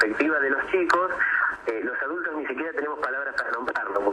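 From 1.56 to 3.96 s, one stereo channel likely drops out, so the summed sound falls abruptly by about 6 dB and anything only in that channel vanishes.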